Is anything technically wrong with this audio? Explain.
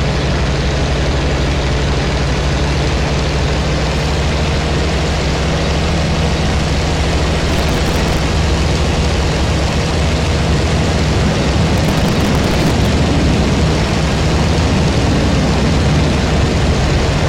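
Yes. Processor overload crackle occurs twice, from 7.49 to 8.19 s and from 11.78 to 12.86 s. In each stretch, the processor repeatedly fails to fill its very short buffers, a few milliseconds each, in time. Dozens of deadlines are missed again and again, and each miss replays a scrap of old audio with abrupt edges. Together these splices form a gritty, tearing crackle laid over the sound, which stops as each overload clears.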